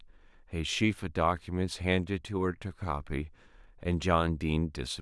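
There are no technical faults to describe in this speech clip.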